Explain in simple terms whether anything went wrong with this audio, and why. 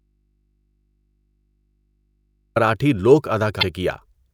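For the first 2.56 seconds the speech is missing and only a faint mains hum is audible. It is already like that when the clip begins, then the voice cuts in abruptly. This is an audio dropout to a faint residue, likely from the signal being lost while the input stayed open and picked up hum.

From 3.59 to 3.63 s there is a short blip. That is damaged data in a compressed stream: corrupted data made the decoder misread that stretch and resynchronise on the next good frame.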